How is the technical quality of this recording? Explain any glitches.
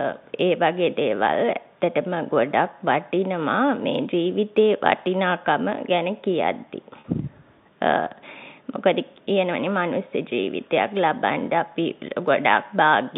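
One glitch stands out, a brief dropout repaired by concealment, heard over the narrow telephone band of G.711 coding, which cuts everything above about 3.7 kHz.

At 7.0 to 7.04 s there is packet loss with pitch repetition. About 40 ms of audio never arrived, which fits two 20 ms packets, so the receiver filled the hole by looping the last pitch period it had. The result is a momentary held, buzzy tone. On a waveform, identical repeating cycles appear there; a spectrogram shows flat, unchanging harmonic lines for that instant.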